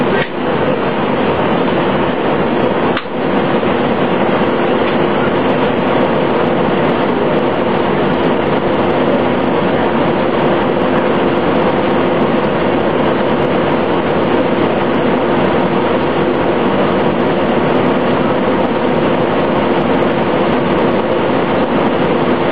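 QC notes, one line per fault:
0.0 to 6.0 s, adaptive stream starting at a low bitrate: the opening 6 seconds have synthetic-sounding treble and stronger codec artefacts, which points to a low-rate start of roughly 20 kbit/s using spectral band replication. At 6.0 s the quality steps up suddenly, which fits a switch to a full-band stream near 96 kbit/s once the connection was measured. There is no gap or stall at the switch, which sets it apart from a rebuffer.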